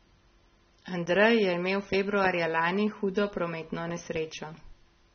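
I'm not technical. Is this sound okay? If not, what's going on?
No. The speech was likely squeezed hard by AAC compression, so throughout it sounds dull and smeared, with nothing above 6.4 kHz.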